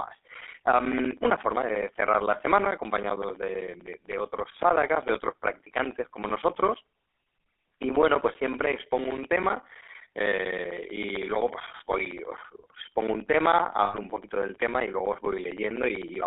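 From start to finish the speech carries GSM full-rate codec damage. The codec rebuilds the voice from a vocal-tract model fed by sparse pulses. That leaves a plainly audible buzzy, gravelly roughness. The band runs only from 300 Hz to 3.6 kHz, and the stream is 13 kbps.

From 13.84 to 13.96 s come lost GSM frames. About 100 ms of data is missing, which points to five dropped frames. The decoder repeats the last good frame. The sound hangs as a rough, metallic ring.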